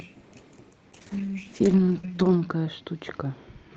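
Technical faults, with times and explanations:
0.93 s to the end, call bitrate drop: the Opus encoder falls from 32 kbps to 8 kbps and stays at its lowest for 1.44 s, so the speech turns coarse and watery and loses its top end. Unlike packet loss, nothing drops out or stutters.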